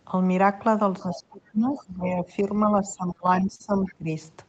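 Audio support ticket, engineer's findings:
Other side's voice leaking through at 1.00–1.23 s, 1.77–1.82 s and 3.86–3.94 s: a faint second voice under the talker, about 20 dB down in the first burst and about 25 dB down in the two shorter ones. Likely cause is residual echo. The far end plays on the device loudspeaker, and the echo canceller leaves part of it in the mic signal.

Speech suppressed in double talk at 1.03–2.5 s and 2.66–4.09 s: the talker's level dips, at the deepest by about 20 dB, for roughly a second in total in each span. The likely component is the echo canceller's suppressor. Unable to separate near speech from loudspeaker echo during simultaneous talk, it attenuates both.

Repeated stalls (stutter) at 3.17–3.62 s: five short hitches, the longest 43 ms, about 82 ms of filled sound in all, roughly a fifth of that span. Content is intact but the audio drags. Probable component is the jitter buffer. 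Packets arrived late, the buffer underran repeatedly, and the receiver extended the last sound until playback could resume.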